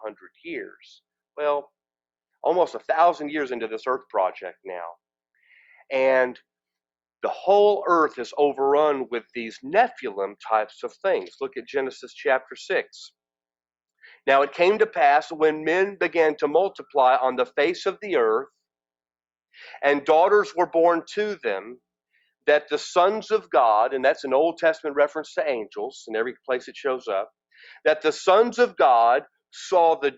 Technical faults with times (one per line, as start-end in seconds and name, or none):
none